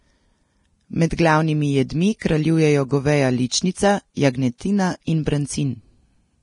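It's a speech recording that's hissy and grainy the whole way through, with nothing above about 10.6 kHz. That's likely heavy Vorbis compression: the treble gets quantised so coarsely it turns to noise, which fits a low bitrate around 30 kbps.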